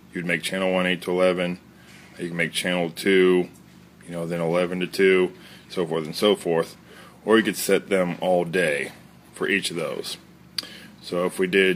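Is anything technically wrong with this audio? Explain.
No, nothing technically wrong can be heard here.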